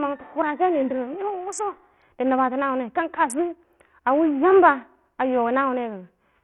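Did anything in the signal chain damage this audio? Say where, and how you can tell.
Yes. The damage sits at the codec stage and runs through the whole clip: the speech carries a gritty, granular texture, and the upper treble flickers in and out rather than holding steady. This is likely Bluetooth SBC compression at a starved bit pool, consistent with roughly 48 kbps. Coarse quantisation of the sub-bands leaves noise and aliasing riding on the speech. A spectrogram would show a hard ceiling with nothing above 16.5 kHz, plus patchy, blocky high bands that switch on and off.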